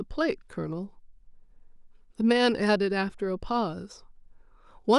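Nothing stood out on listening to this recording of speech.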